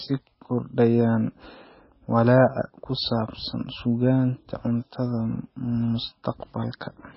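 A starved MP3 encoder is the likely cause throughout this speech recording: heavy MP3 compression at what sounds like roughly 18 kbps leaves nothing above 5.6 kHz, and weak frequency lines flicker between frames, giving a watery, swirling texture with chirpy s sounds and smeared attacks.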